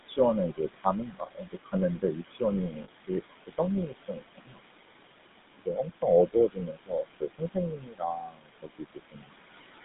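Overdone noise removal runs from start to finish. The room noise sits about 10 dB below the speech, and the reduction is pushed so hard that any frequency band close to its noise estimate is pulled nearly to nothing. Quiet parts of the speech are taken along with it. Between phrases the background collapses into near silence scattered with twinkling specks.

Noise suppressor artifacts are present through the whole clip as well. Working frame by frame, the suppressor lowers whatever bands it judges to be steady noise, by about 20 dB. As a result the noise floor sinks in the pauses and climbs back up underneath the speech. The residue that survives warbles and flutters instead of staying smooth.

GSM full-rate codec damage is plainly audible throughout. The coder models the vocal tract and excites it with regularly spaced pulses, keeping only a sparse fraction of the excitation, which fits the 13 kbps full-rate mode. 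The result is a buzzy, gravelly roughness. The band is confined to roughly 150 Hz to 3.7 kHz, so the sound is boxy, with no air above that limit.

Speech cut by the noise suppressor appears at 0.05 to 0.19 s, again across 0.52 to 4.63 s, and once more from 5.28 to 9.78 s. The suppressor mistakes parts of the speech for background and drops them, at the deepest by about 21 to 22 dB. Soft consonants, word endings and quieter stretches sound swallowed or faint. In total this affects around a tenth of a second in the first span, about one and a half seconds in the second, and about two seconds in the last.

Lost GSM frames occur at 2.84 to 2.89 s, inside the second suppressed stretch. A gap of about 40 ms, consistent with two missing codec frames, is covered by repeating the parameters of the last good frame. It is heard as a brief rough, metallic ring in place of the real sound, too short to fade fully to silence.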